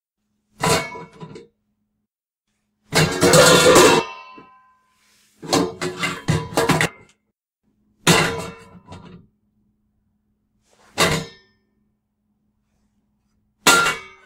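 Compressed frames skipped at 3.99 s, 5.71 s, 6.85 s and 11.11 s: each time the everyday sound jumps forward, losing roughly a tenth of a second, or about two tenths at 6.85 s. The jump sizes point to whole 20 ms codec frames missing or rejected by the decoder, so the stream resumes a few frames later.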